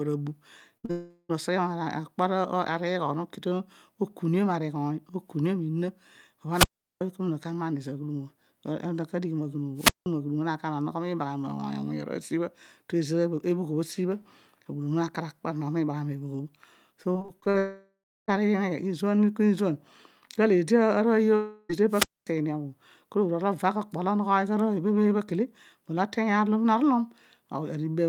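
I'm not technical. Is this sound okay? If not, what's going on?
No, there are a few separate problems here, and most of them come from the connection dropping bits of the audio.

Right at the start, from 0.77 to 0.85 s, there's a burst of packet loss. About 60 ms of the recording never arrived, so the playback stretched out the last bit of sound and faded it down to cover the hole. You hear a short held buzz or hiss, and a small piece of the speech is simply gone.

That runs straight into a short concealed packet loss from 0.85 to 0.91 s. Another 40 ms or so went missing, and again the gap was papered over by continuing the sound that came just before it and then blending back in. It's brief, more of a smear or wobble than a clear break, and a small sound in there can drop out completely.

Then comes a long network dropout, which is the likely cause of three bigger gaps. From 0.91 to 1.31 s about 0.4 s is lost. 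The sound is stretched and fades away, ending in a moment of silence. From 17.58 to 18.30 s around 0.7 s goes missing, with roughly the last third of a second silent. From 21.36 to 21.71 s about a third of a second drops out, covered the whole way by a fading buzz or hiss. Each time, the speech picks up again further on, with the missing part gone for good.

Separately, there are three wireless microphone squelch dropouts. A radio mic's signal got weak enough that the receiver shut the sound off completely. You'll hear a little rise of hiss or static, then near silence, then the voice coming back. The muted stretches are about 0.38 s between 6.52 and 7.01 s, about 0.18 s between 9.76 and 10.06 s, and about 0.24 s between 21.89 and 22.29 s.

Finally, from 17.03 to 17.56 s there's repeated packet loss, which gives a robotic sound. Eight small gaps, none longer than 40 ms, hit in quick succession, so about a third of that half-second is patched-over filler. 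The result sounds choppy, with pieces missing, and it leads right into the long dropout at 17.58 s.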